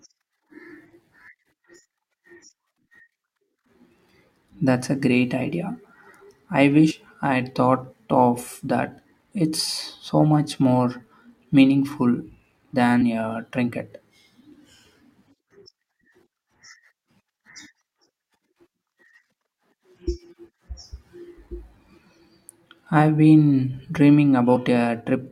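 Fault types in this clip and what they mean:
Damaged data in a compressed stream: three brief glitches break into the speech, at 6.90 to 6.92 s just before "I had thought of", at 13.01 s just before "a trinket", and at 24.55 to 24.57 s. Each lasts only about 20 ms. Part of the compressed data was corrupted or lost at those points, so the decoder misread those frames, lost its place in the stream and resynchronised at the next valid frame header.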